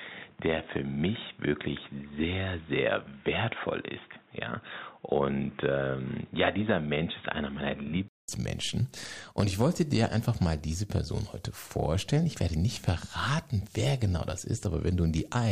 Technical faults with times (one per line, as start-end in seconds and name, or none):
0.00-8.28 input switched to a poorer device